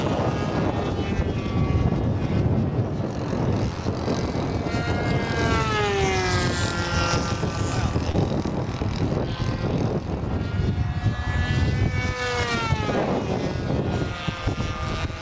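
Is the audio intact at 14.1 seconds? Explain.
Yes, the audio is intact at 14.1 seconds, with no dropout, glitch or other fault at that moment.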